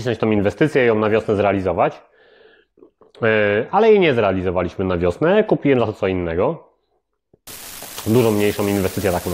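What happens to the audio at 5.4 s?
Nothing goes wrong at 5.4 s; the speech carries straight through that moment intact, with no dropout, glitch or distortion.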